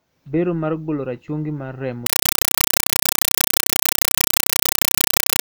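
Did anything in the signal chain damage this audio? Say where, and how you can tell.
Yes. At playback, from 2.06 s, just after "golo rachungi mar remo", the speech gives way to loud, chattering static that lasts to the end. It consists of 5.33 ms noise bursts repeating at 31.25 Hz. This is a compressed stream played as audio. The pattern points to undecoded AC-3 frames being treated as ordinary samples.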